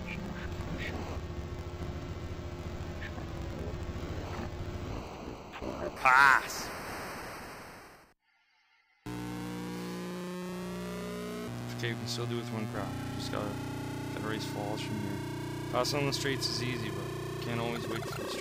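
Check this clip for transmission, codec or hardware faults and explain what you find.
One fault is present. From 0.0 to 5.97 s, interleaved audio is read as planar: each 21.77 ms block splits into half-speed halves, so the sound drops an octave, doubled and choppy at 45.9 Hz.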